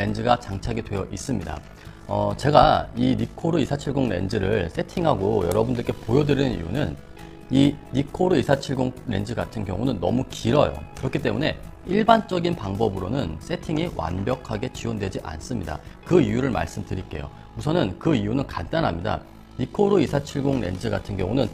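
The whole clip has an overlap-add ripple: the level pumps up and down by about 11 dB around fifty times a second, giving a rough, robotic flutter. The audio was chopped into windowed frames and rejoined with overlaps that don't add up to a steady gain.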